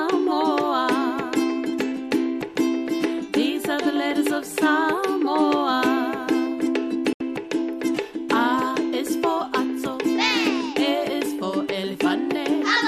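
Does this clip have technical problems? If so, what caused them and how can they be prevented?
Yes. A digital broadcast dropout at 7.13 to 7.21 s: the receiver lost valid frames, which fits about three failing, and muted. The sound fades out within 3 ms and leaves a 72 ms silence. Improving reception with a better antenna or a more robust transmission mode would keep frames decoding cleanly.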